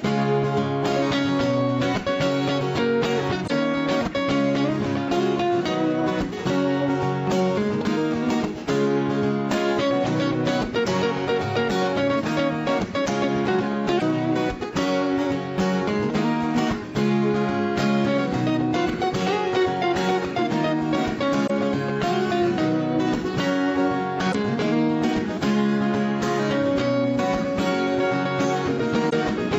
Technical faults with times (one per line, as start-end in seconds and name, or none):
3.44-3.50 damaged data in a compressed stream
13.96-14.02 damaged data in a compressed stream
21.43-21.50 damaged data in a compressed stream
24.28-24.35 damaged data in a compressed stream
29.06-29.13 damaged data in a compressed stream